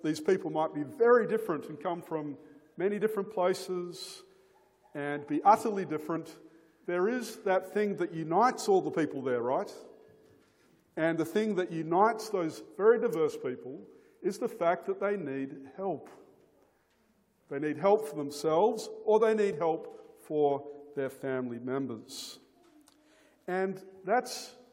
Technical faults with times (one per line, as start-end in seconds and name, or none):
1.49 corrupt frame decoded
6.13-6.16 compressed frames skipped
12.62-12.68 compressed frames skipped
19.53-19.55 compressed frames skipped